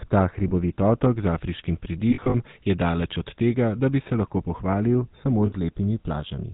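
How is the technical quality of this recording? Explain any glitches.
The technical quality is poor. The speech passed through a low-bitrate phone codec, and it drops out briefly three times.

Throughout the clip, the GSM full-rate codec is plainly audible. This coder models the vocal tract and drives it with a sparse train of pulses, which fits the 13 kbps full-rate GSM scheme. Nothing above 4 kHz survives. The voice sounds narrow, buzzy and gravelly. Sibilants lose their edge.

Lost GSM frames occur three times. The first is at 0.48 to 0.51 s, just before "otok z afriškim". About 20 ms is missing, which fits one dropped frame. The second runs from 2.10 to 2.35 s, between "otok z afriškim" and "je daleč od". About 140 ms is lost, scattered over 240 ms, with the longest gap about 40 ms. The third is at 5.46 to 5.53 s and lasts 60 ms. Each time, the decoder repeats the last good frame. This holds the sound as a short, rough, metallic ring in place of the missing audio.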